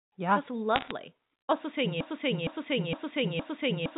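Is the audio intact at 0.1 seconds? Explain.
Yes, the speech at 0.1 seconds is intact, with no fault at that moment.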